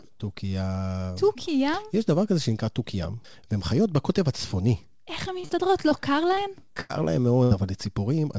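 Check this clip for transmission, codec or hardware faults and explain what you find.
Two kinds of network fault affect the second half of this speech recording. The audio passed through a call codec. Nothing is heard above 8 kHz, which fits G.722 at 64 kbps.

Short concealed packet loss occurs at 5.40 to 5.46 s and again straight after, from 5.46 to 5.51 s. It recurs at 5.89, 6.35 and 6.65 s. Each gap lasts about 20 to 40 ms. The receiver stretched the previous sound across it and blended back. Each one is a brief smear or wobble.

Bursts of packet loss run from 6.81 to 6.91 s and from 7.43 to 7.53 s. About 80 ms went missing each time. The decoder held the last sound and faded it. The result is a short buzz or hiss, then the speech jumps ahead.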